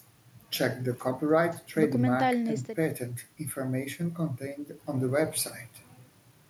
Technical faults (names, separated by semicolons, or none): none